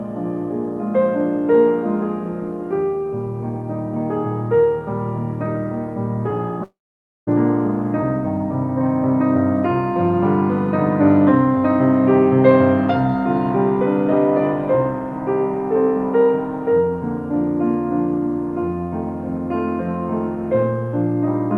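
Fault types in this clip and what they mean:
long network dropout: Audio packets likely stopped arriving for about 0.64 s, so from 6.63 s the receiver stretches the last sound into a fading buzz that soon gives way to near silence. The sound returns at 7.29 s with that stretch simply gone.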